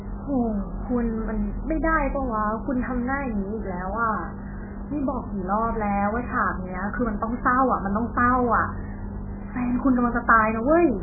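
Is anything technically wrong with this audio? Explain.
Yes. Throughout the speech, the sound is muffled and watery, with nothing above 2.5 kHz and faint detail swirling in and out. That is likely heavy MP3 compression. Short of bits, the encoder cut off the treble and dropped weak frequency lines frame by frame, which fits a bitrate near 8 kbps.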